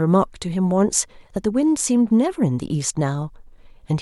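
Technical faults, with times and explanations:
No technical faults can be heard in the speech.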